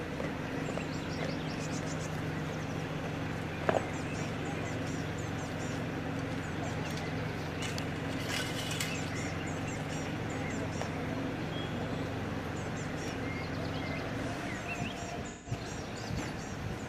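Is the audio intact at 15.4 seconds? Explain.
No, there's AAC frame loss with concealment from 15.28 to 15.52 s. The decoder patches the roughly 170 ms gap from the last good spectrum, so it sounds smeared and noisy.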